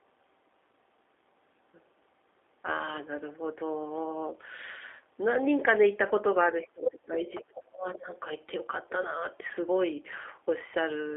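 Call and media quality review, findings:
G.729 codec, whole clip: speech band-limited to roughly 300 Hz to 3.6 kHz, rough and synthetic, plainly audible. Vocal tract filter plus sparse pulse excitation per 10 ms frame; character fits 8 kbit/s G.729A narrowband VoIP.

Speech suppressed in double talk, 6.43 to 8.09 s: talker dips and breaks up in pieces, deepest around 25 dB, about 1.5 s affected in total. Likely echo canceller attenuating both sides while far end talks over.

Other side's voice leaking through, 7.35 to 7.6 s: faint second voice, about 20 dB below main speech, inside the suppressed stretch. Likely residual loudspeaker echo the canceller failed to remove from the microphone.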